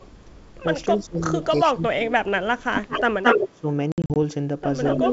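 Echo leak runs from 0.00 to 0.55 s, a faint delayed copy about 35 dB down arriving 282 ms behind the speech. It likely comes from a loudspeaker on the far end whose echo canceller let some of its microphone pickup return. It recurs at 1.42 to 1.60 s, about 20 dB down.

Speech suppressed in double talk follows at 0.96 to 1.31 s, dipping by about 15 dB. It deepens from 1.54 to 2.91 s, with drops near 25 dB over about a second, as the canceller, likely unable to tell talker from echo while both sides overlap, turns everything down.

The echo leak returns at 2.75 to 3.03 s and 3.23 to 3.60 s with a shorter 219 ms delay. It reaches about 5 dB down and then about 5 dB above the speech. A brief suppression dip of about 15 dB falls at 3.51 to 3.66 s.

Packet loss on an ADPCM call hits between 3.92 and 4.17 s. Some 140 ms of silent gaps, the longest 60 ms, are scattered over 240 ms, which fits about seven lost packets. 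After each hole the decoder's predictor is out of step, so speech resumes slightly distorted, under light G.722 upper-band hiss.

The echo leak comes back at 4.84 to 5.12 s, at about the same level as the speech.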